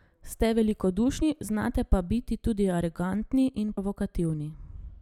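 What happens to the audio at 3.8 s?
At 3.76 s some compressed frames are skipped. About four whole frames never play, so roughly a tenth of a second of speech drops out. The jump fits frames of 23.2 ms. The audio jumps ahead at the join.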